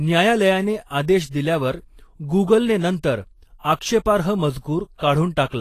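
From start to finish the speech carries plainly audible Vorbis compression damage, likely from a low-rate encode in the region of 31 kbps. Nothing reaches above 14.2 kHz, and the coarsely quantised treble turns into hiss-like grain, roughening tones and softening consonant attacks.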